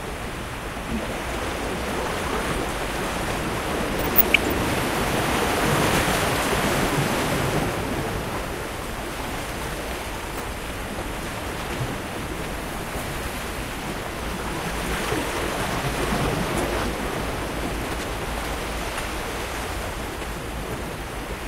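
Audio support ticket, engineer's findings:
DAB burbling at 3.95–4.56 s, 10.36–10.58 s, 17.91–18.12 s and 20.06–20.24 s. Short noise blips over the sound. Weak reception leaves residual bit errors, around 0.2%, in MP2 data. Noise blips hit single sub-bands rather than dropping out like packet loss.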